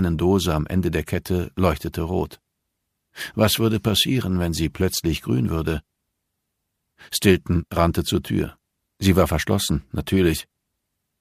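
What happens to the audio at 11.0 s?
Nothing goes wrong at 11.0 s; the audio runs on intact through that moment, with no dropout, click or other fault.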